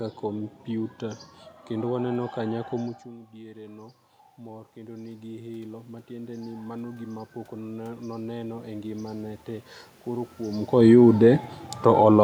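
From 4.46 s to 10.34 s the speech slowly swells back up, and the room noise behind it rises in step, so the background grows more noticeable as the voice recovers. This is automatic gain rising. After the talker moved away from the microphone around 3 s, the input fell by about 18 dB. The gain control judged the level too quiet and raised its gain gradually, by about 11 dB, over nearly six seconds.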